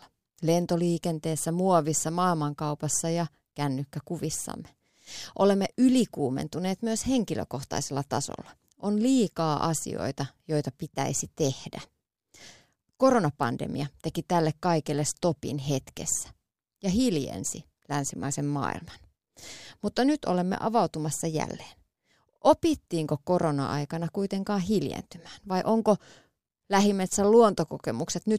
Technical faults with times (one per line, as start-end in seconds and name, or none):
none